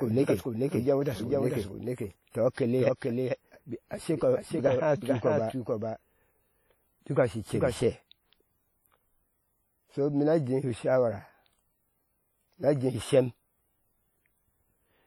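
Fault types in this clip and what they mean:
WMA compression: heavy, ringing, washy smearing with hiss that breathes with the sound, likely from a WMA transform codec at about 32 kbps; the spectrogram shows energy blurred across tens of milliseconds.
Doubled audio track: a second full-band copy about 5 dB quieter trails roughly 0.4 s behind from the start, stopping abruptly at 7.78 s; the waveform shows repeated envelopes offset in time, likely from a second capture or an edit.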